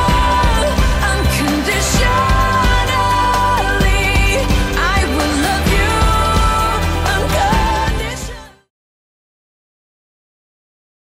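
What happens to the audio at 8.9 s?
Nothing is wrong at 8.9 s: the sound there is intact, sitting just after a smooth fade-out that has brought the level down cleanly with no click or hard edge.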